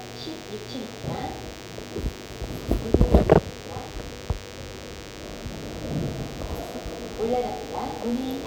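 From start to end, a DECT cordless phone buzz runs under the sound: radio bursts repeating at 100 Hz are rectified by the audio circuit into a thin, steady buzz roughly 15 dB down. A spectrogram shows evenly spaced harmonic lines at 100 Hz intervals, and the waveform shows a regular 10 ms ripple.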